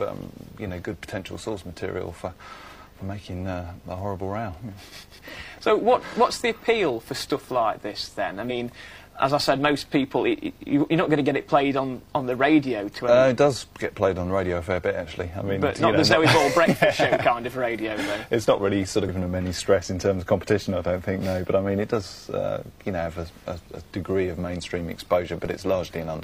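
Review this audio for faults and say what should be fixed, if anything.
Two short bursts of damaged data in a compressed stream occur, from 8.41 to 8.51 s and from 19.04 to 19.10 s. Each is a brief glitch where the decoder hit corrupted frames, lost sync and resumed at the next valid header. Unlike a plain dropout, which is silence, these bursts are decoding errors rather than a simple gap in the signal. Preventing it means checking stream integrity with per-frame checksums and a reliable transfer, and keeping metadata out of the audio payload.

A DC step at 25.45 s shifts the waveform's zero line suddenly, producing a single low thump while the sound itself continues unaffected. The offset then dies away, as a 20 Hz high-pass stage drains it rather than holding it. A transient click from a damaged sample would be sharp and bright, but this is dull and bass-heavy. Preventing it means keeping converter recalibration and input switching from happening during recording, or AC-coupling sources with offset.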